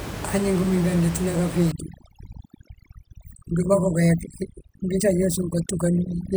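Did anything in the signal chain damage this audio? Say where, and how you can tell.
Yes. Overdone noise removal in the processing stage starts at 1.72 s and runs to the end. The room noise, about 11 dB below the speech, drops and breaks up into twinkling specks. An oversized suppressor zeroes bands near its noise estimate, quiet speech detail included.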